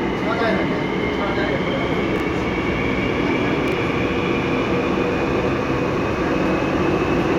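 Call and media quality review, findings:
Chunks out of order, twice: 2.16–2.20 s and 3.68–3.72 s. Each time a 20 ms chunk lands one slot late, swapping places with its neighbour, so you get a tiny jumbled stutter. Nothing's actually missing. Probable component: jitter buffer or packet reordering on the receive side, or the writer committing chunks out of sequence. Worth checking sequence-number handling there.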